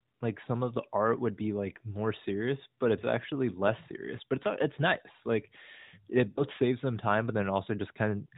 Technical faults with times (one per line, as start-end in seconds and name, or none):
6.30-6.43 lost AMR speech frames